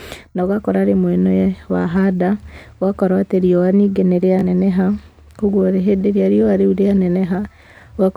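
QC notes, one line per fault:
4.39–4.44 s, Bluetooth stutter: just after "atĩ riũa ningĩ nĩ", the wireless link dropped or delayed audio data, and the receiver filled the gap by replaying its last buffered slice. The result is a brief repeated fragment, a quick catch in the speech lasting about 50 ms. When playback resumes, roughly 30.5 ms of sound is missing, which points to about two lost packets.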